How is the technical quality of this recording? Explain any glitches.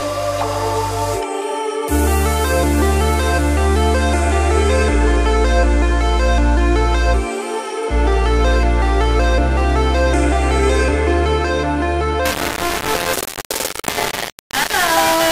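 The last few seconds are badly degraded. From 12.25 s to the end at 15.31 s, the sound turns harsh and grainy. This is likely low bit depth without dither. The grit tracks the sound itself, fitting coarse 3-bit rounding, with error nearly as loud as the signal.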